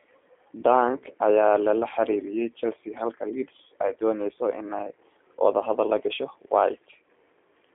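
From start to finish the speech carries G.729 codec damage, and it is plainly audible. The sound is squeezed into a telephone band of roughly 300 Hz to 3.5 kHz, with nothing above 3.6 kHz. The voice is rebuilt from a vocal tract model, a pitch predictor and a few pulses per short frame, which fits an 8 kbit/s G.729A stream. Simple band-limiting would leave a clean but muffled voice. Here the voice also sounds rough and faintly synthetic.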